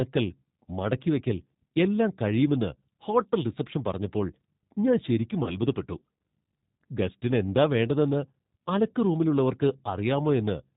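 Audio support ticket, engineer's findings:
G.729 codec, throughout. Band-limited speech, nothing above 4 kHz, with a plainly audible rough, slightly synthetic texture. Component: CELP voice codec, consistent with G.729A at 8 kbit/s. Mechanism: voice rebuilt from a vocal tract filter, a pitch predictor and a few pulses per sub-frame, so fine waveform detail and upper harmonics are discarded.

VoIP packet loss concealed by the speech codec, 5.44 to 5.58 s, right after "റിസപ്ഷൻ പറഞ്ഞപ്പോൾ ഞാൻ ശരിക്കും". About 20 ms missing, fitting two 10 ms frames. Decoder extrapolates its last pitch and filter with falling gain, producing a brief buzzy tone or coloured noise that fades. The predictor state is corrupted, so speech stays weak and distorted until about 5.58 s, well after packets resume.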